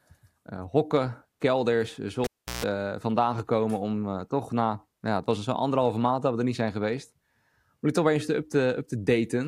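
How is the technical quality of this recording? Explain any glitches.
The recording has one glitch. Between 2.24 and 2.65 s, right after "kelders eh", a pop cuts the speech to near silence for about 0.36 s. A cable pulled and plugged in back causes this: the live lead is pulled out, then reinserted. As only the tip touches, a 60 Hz mains buzz of about 0.15 s bursts through, and a second pop brings the speech back at "vandaan gekomen".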